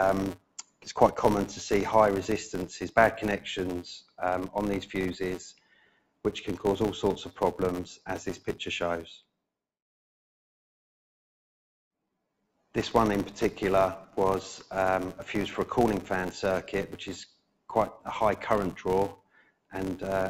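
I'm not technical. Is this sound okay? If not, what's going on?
No. A noise suppressor applied to music or sounds, one built for speech, treats steady tones and fading tails as noise. Held sounds sink and pump throughout.

There's also a filter restarted on every block. Each restart adds a tiny click, making a buzz near 172 Hz that rises and falls with the sound, which fits 256-sample blocks.

At 0.37–0.9 s, 4.01–4.2 s, 5.53–6.25 s, 17.27–17.69 s and 19.16–19.73 s, the sound is cut by the noise suppressor. It drops sharply, then returns.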